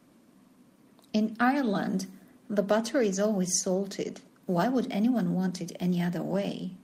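No technical faults are audible.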